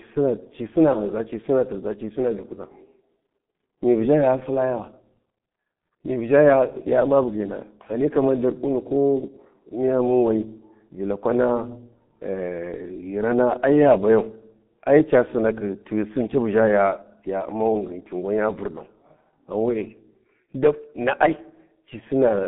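Speech, carried throughout by the G.723.1 codec. Nothing reaches above 3.8 kHz, and the band sits roughly between 150 Hz and 3.5 kHz, giving a muffled, hoarse sound. Heavy coding damage smears consonants, consistent with a 6.3 kbit/s stream and a slowly updated voice model.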